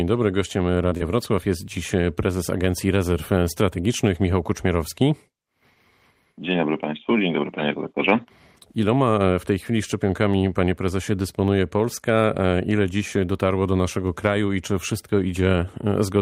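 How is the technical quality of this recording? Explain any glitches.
The speech has two brief glitches from short concealed packet loss, both near the start. The first runs from 0.89 to 0.93 s, the second from 0.97 to 1.02 s. Each time, about 20 ms of audio arrived too late for the decoder. The receiver covered each gap by extending the preceding sound, then blended back into the real signal. The result is a quick smear or wobble, and a short consonant may drop out.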